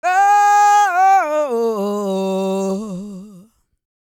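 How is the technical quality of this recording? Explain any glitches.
No glitches turn up anywhere in this recording, so there's nothing here that needs explaining.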